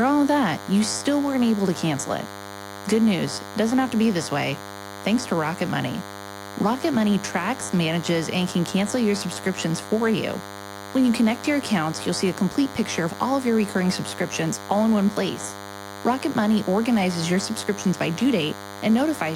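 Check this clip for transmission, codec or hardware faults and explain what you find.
A thin, steady buzz at 100 Hz, rich in harmonics, runs under the sound for the entire clip, sitting roughly 15 dB below it. This is DECT cordless phone buzz: a nearby handset or base transmits a radio burst every 10 ms, and the audio circuitry rectifies those bursts into audible pulses.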